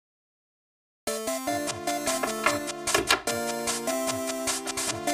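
Channel delay causing comb filtering runs through the whole clip. One channel arrives roughly 3 ms behind the other, and when the two are summed to mono, the content they share cancels at evenly spaced frequencies. The first notch falls somewhere around 150 Hz, with further notches repeating up the spectrum at a spacing of roughly 300 Hz. These fixed gaps give the audio a hollow, phasey colouration from start to finish.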